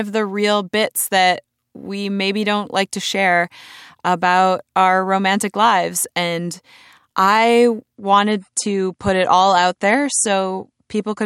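At 7.96 s the audio shifts abruptly to an adaptive stream at a lower bitrate, and stays there to the end. The connection slowed, so the player switched to a leaner encode. Nothing survives above 11.2 kHz, and the speech gains a thinner, swirly codec texture, consistent with a drop from around 128 to roughly 49 kbit/s MP3. Unlike a buffering stall, there is no gap or pause. Unlike a simple filter, the artefacts rise along with the lost treble.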